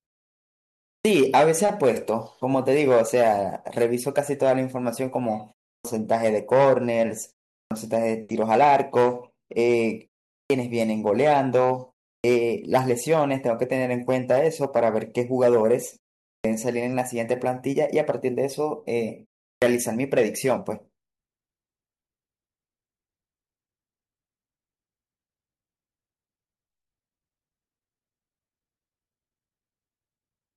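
Speech lurches in abruptly out of silence at 0.97, 5.77, 7.62, 10.41, 12.15, 16.36 and 19.54 s, each time missing its opening sounds. This is a clipped start after a pause. After gaps of 0.3 to 0.97 s, the sleeping output device wakes late and swallows 76 to 90 ms of sound.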